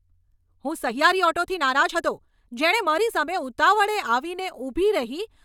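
A time-stretched section runs from 0.00 to 3.44 s, where the speech moves about 1.36 times faster than normal with its pitch unchanged, sounding rushed. The likely cause is software shortening this stretch by dropping small slices of audio to preserve pitch.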